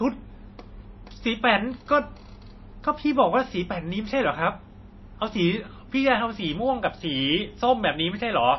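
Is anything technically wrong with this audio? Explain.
Yes. MP3 compression is audible throughout: the speech has nothing above 5.8 kHz and sounds watery and swirly, with smeared onsets. The likely cause is an encoder short of bits, consistent with about 24 kbps. It cuts the treble and zeroes weak frequency lines that flicker from frame to frame.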